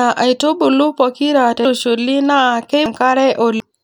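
A speech recording with compressed frames skipped three times: just after "aitubulu pokira" at 1.65 s, then at 2.86 s and 3.60 s. At each point the decoder drops whole frames of about 92.9 ms, roughly three, five and three frames, so the speech leaps ahead by around 0.3 s, 0.5 s and 0.3 s. A spectrogram shows abrupt vertical seams where harmonics and formants break discontinuously, and the waveform shows sudden envelope changes without any silent gap.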